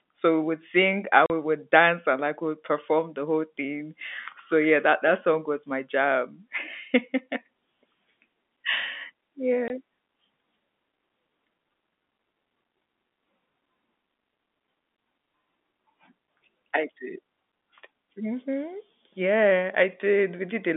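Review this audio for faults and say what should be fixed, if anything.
Packet loss filled with silence at 1.26–1.30 s and 9.68–9.70 s: missing packets were replaced by silence, leaving hard-edged 40 ms and 20 ms holes, consistent with 20 ms packets. Enabling packet loss concealment, ideally with forward error correction, on the G.711 link would fill these gaps instead of muting them.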